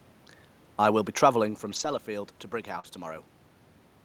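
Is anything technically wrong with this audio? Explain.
Yes. From 1.71 to 1.97 s and again at 2.83–2.85 s, a lost packet rebuilt from error correction: low-bitrate backup copies replaced missing audio, sounding rougher and noisier. The first span fits about seven lost packets.

At 2.79–2.85 s, a short concealed packet loss: about 40 ms never arrived, so the decoder extended the preceding sound, heard as a brief smear.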